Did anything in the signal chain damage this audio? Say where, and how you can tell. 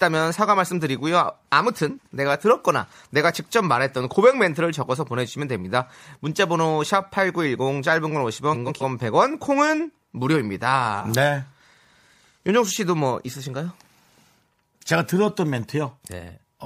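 Yes, frames out of order from the network. At 1.99–2.09 s and 8.53–8.84 s, adjacent blocks play swapped. Each causes a garbled flutter.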